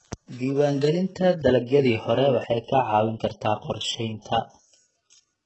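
Across the whole speech clip the treble sounds synthetic rather than recorded, and nothing is present above 8 kHz. This points to heavy HE-AAC compression as the likely cause, at a very low bitrate consistent with about 8 kbps. The upper band is rebuilt by copying lower bands upward under a coarse envelope, so its harmonics fail to line up with those below the crossover. As a result, sibilants come across gritty, metallic and somewhat lispy.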